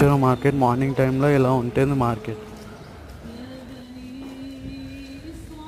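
No technical faults can be heard anywhere here.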